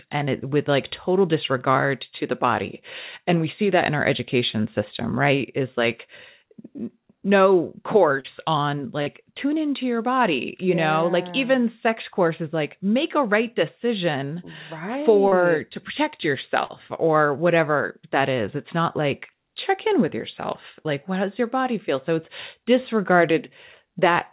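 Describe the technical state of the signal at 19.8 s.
At 19.8 s the speech is intact, with no fault at that moment, only the call codec's narrow band that stops at 4 kHz.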